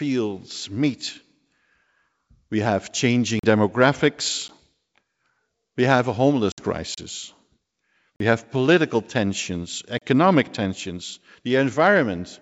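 Around 3.39 s the audio drops into a block of digital silence for about 43 ms, and it does it again as a brief tick at 4.48 s (about 11 ms), then at 6.94 s (32 ms), 8.16 s (43 ms, just before "have political tensions") and 9.98 s (32 ms, just after "have political tensions"). Each time, a run of samples dropped out abruptly with no fade. The 43 ms holes fit a 2048-sample buffer that wasn't filled in time, and the short one fits a 512-sample buffer.

Right after "we have a", from 6.52 to 6.60 s, there's packet loss on an ADPCM call. Several packets went missing, about 60 ms of audio, and were replaced with silence. Through the G.722 wideband path, the speech then comes back with a bit of distortion. That's the decoder's predictor and step size out of sync with the sender until they settle a few tens of milliseconds later.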